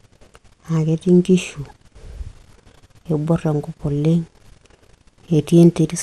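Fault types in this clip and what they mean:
MP2 compression: Throughout, the speech sounds dull, gurgling and grainy. Likely MPEG Layer II starving upper sub-bands of bits, which fits about 80 kbps.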